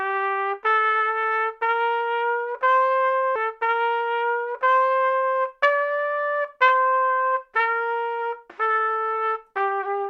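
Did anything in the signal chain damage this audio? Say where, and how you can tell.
Yes: a stream segment repeated from 3.35 to 5.35 s, at the playback stage. Two seconds of sound play a second time, with a small blip where the audio jumps back, which shows that the player fetched or queued the same stream segment twice.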